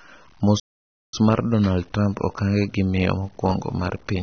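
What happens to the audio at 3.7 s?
At 3.7 s the speech is carrying two faults that run through the whole clip, so neither starts or stops there.

The first is low bit depth without dither. The signal was most likely truncated to a very coarse word length, around 8 bits, with no dither to break up the rounding. The error tracks the speech itself, sitting only about 35 dB below it, so quieter stretches turn grainy and gritty. The fainter tails fizz or sputter between two steps instead of fading smoothly.

The second is AAC compression. The audio was likely encoded with AAC-LC at a low bitrate, around 24 kbps, and the encoder discarded detail its hearing model judged expendable. The high-frequency cut-off is lowered, so the speech sounds dull and muffled. The coarse spectral coding leaves plainly audible damage: a smeared, warbling quality on sustained sounds and a swirly, fizzy edge on sibilants.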